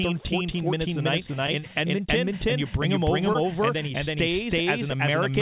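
Throughout the clip, a doubled audio track is audible: a second, full-band copy of the speech trails the original by roughly 0.3 s at about the same level. It is dry, with no room decay, so it reads as a distinct echo rather than reverberation. The likely cause is the audio being captured twice, once through a slower path, or an edit leaving two copies out of alignment.

From 1.31 to 1.64 s, repeated packet loss gives the speech a choppy, robotic quality. Four short holes, none longer than 20 ms, fall close together. The receiver patched each by extending the preceding sound, so about 18% of that stretch is synthetic continuation with fragments missing.

At 3.33 to 3.37 s, between "and you bring him" and "and then he", a short concealed packet loss removes about 20 ms. The decoder bridges it with a brief extrapolation of the last sound, heard as a small smear or wobble before the real audio resumes. 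The whole clip is also band-limited, with nothing above 4 kHz, which points to a narrowband call codec such as G.711.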